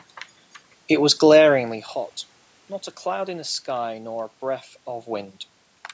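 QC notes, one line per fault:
No faults found in the speech. The call's microphone processing leaves nothing above 8 kHz, some room noise sits underneath, and the level shifts around 1.5 s and again near 5 s as the talker moves.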